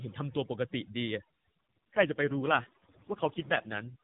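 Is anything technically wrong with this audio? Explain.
Yes, two faults are audible in this speech clip, heard through a mobile narrowband path that keeps everything below 4 kHz.

Overdone noise removal affects the whole clip. The denoiser was set too aggressively, so it cut bands near its noise estimate along with quiet parts of the voice. Pauses fall to near silence with twinkling specks. On a spectrogram, the gaps look almost black apart from scattered isolated dots, and the edges of the voice look ragged and full of holes.

An AMR rate drop runs from 1.70 to 3.96 s. The codec switched to a lower rate on a weak link, which fits a fall from 12.2 to 4.75 kbps. The voice turns rougher, buzzier and more synthetic, with no gap and no change in bandwidth. A spectrogram shows a smeared harmonic structure, while the 4 kHz ceiling stays where it was.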